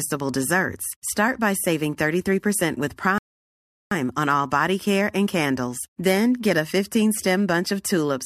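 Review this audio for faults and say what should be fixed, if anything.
The player drained its buffer of downloaded audio and halted until more data came in, a rebuffering stall from 3.18 to 3.92 s. The speech drops to silence for about 0.73 s, then picks up exactly where it stopped, losing nothing but adding time. Preventing it means holding a larger playback buffer or adapting to a lower bitrate before the buffer runs dry.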